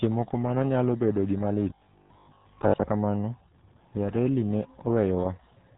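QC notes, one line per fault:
throughout: RealAudio 14.4 codec. Audio is coded at 8 kbit/s with nothing above 3.8 kHz, giving a muffled, gargly sound. The gargle, not just dullness, sets it apart from a simple low-pass.
1.70 to 2.86 s: robotic sound from repeated short buffers. A rigid, metallic 50 Hz buzz runs through the speech, likely from a 20 ms chunk being replayed for most of the stretch. The fixed pitch separates it from codec gargle.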